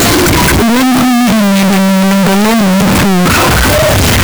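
Speech, heavily distorted from start to finish by a float read as integer fault. The waveform is flattened into a nearly square shape sitting at an almost fixed, high level, so the audio is very loud and harsh, and the background noise comes through as loud as the speech itself. The pitch contour can still be followed. The likely cause is 32-bit floating-point samples being interpreted as 32-bit integers, so sign and exponent bits set each sample's value.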